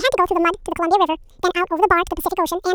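From start to finish, the speech plays at double speed. The fault is audio read two samples at a time. The playback side treats each pair of samples as a single frame, as if the stream had two channels or wider samples. Half the frames are effectively skipped in time, so everything runs twice as fast. Pitch rises by 12 semitones, a full octave.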